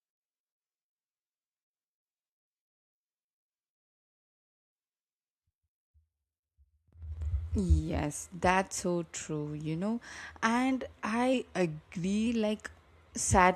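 A drift correction step runs from 11.34 s to 12.27 s in this speech: for just under a second the audio slows by 6.3% and drops about 113 cents, slightly more than a semitone, with speed and pitch falling together before snapping back to normal. The likely cause is clock-matching software that changed the playback rate in a single jump to refill its buffer, rather than adjusting gradually.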